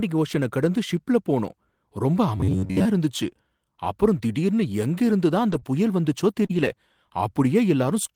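Robotic sound from repeated short buffers runs from 2.37 to 2.85 s, just after "கடந்து ஷிப்ல போனோம் ரொம்ப". A fixed buzz at 93.8 Hz covers most of this stretch. It is likely caused by a buffer of about 10.7 ms being replayed while new audio arrives too seldom.

A lost packet rebuilt from error correction follows at 5.51 to 5.57 s. About 40 ms were decoded from low-bitrate copies carried in the next packets, which fits two packets. The rebuilt audio sounds rougher and noisier, with no gap.

Short concealed packet loss comes at 5.59 to 5.64 s. About 20 ms never arrived, and the decoder extended the preceding sound for 22 ms, giving a brief smear.

A rebuilt packet then covers 5.64 to 5.66 s, 20 ms of rough audio just before "புயல் வந்துச்சோ".

A second concealed loss at 6.46 to 6.51 s fills about 40 ms of missing audio with 37 ms of continued sound.

A rebuilt stretch overlaps it from 6.49 to 6.67 s. 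That is 100 ms of coarser, noisier reconstruction, which points to five packets.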